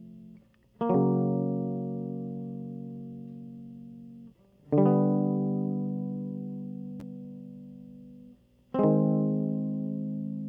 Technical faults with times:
none

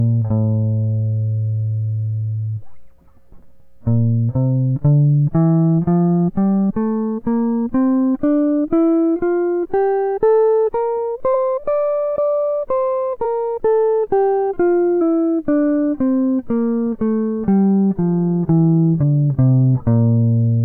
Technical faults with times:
6.69-6.71 compressed frames skipped
11.33 compressed frames skipped
13.24 compressed frames skipped
15.00 compressed frames skipped
19.02 compressed frames skipped

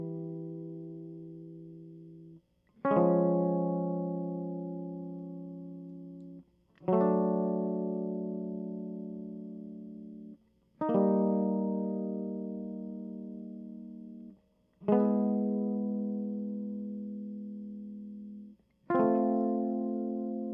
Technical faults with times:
none

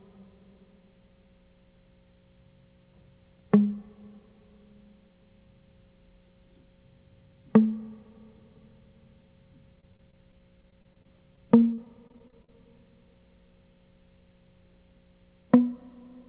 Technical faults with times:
9.76-12.49 repeated packet loss (robotic sound)

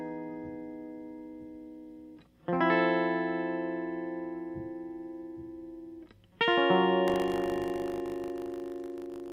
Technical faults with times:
7.06-9.32 buffer tearing

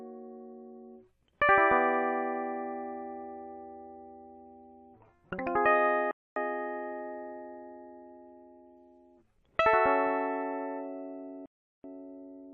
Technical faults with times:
6.11-6.36 Bluetooth stall
11.46-11.84 Bluetooth stall

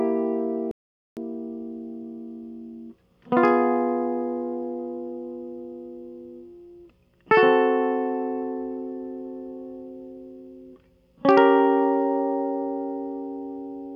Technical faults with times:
0.71-1.17 audio dropout to silence

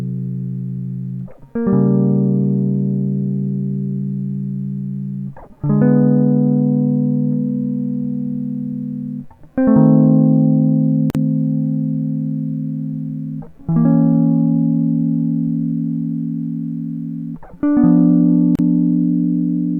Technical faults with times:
11.10-11.15 gap at a join of encoded pieces
18.55-18.59 gap at a join of encoded pieces

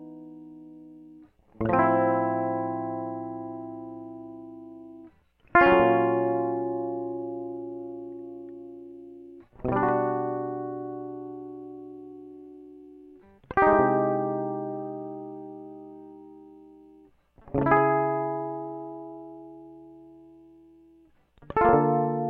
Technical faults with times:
none

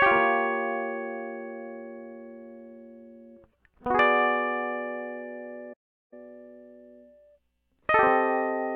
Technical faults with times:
5.73-6.13 playback stall

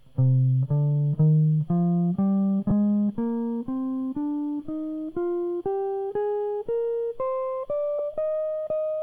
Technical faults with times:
2.69-2.71 lost LE Audio frames
7.99 lost LE Audio frames

